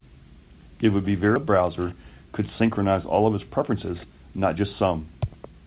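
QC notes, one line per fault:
1.36–1.38 s, skip ahead: playback jumps forward with no fill, so about a second of speech is simply gone and the sides of the cut are butted together. The listener hears an abrupt jump in the sentence rather than a pause. On the waveform the envelope changes shape instantly at the splice with no silence between. On the spectrogram formant tracks break off and restart at unrelated positions, a vertical seam across the band, which tops out near 4 kHz throughout the clip.
1.45–1.86 s and 2.4–5.01 s, jitter buffer speed-up: after the jump the receiver held more audio than it wanted and trimmed short pitch-period slices repeatedly to drain the backlog. The first stretch runs about 11% fast and drops roughly 50 ms. The second runs about 9% fast and drops roughly 200 ms. Pitch stays put while syllables arrive hurried. The spectrogram shows harmonic spacing unchanged but formant transitions and syllables compressed in time. 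The waveform shows periods missing at regular small splices.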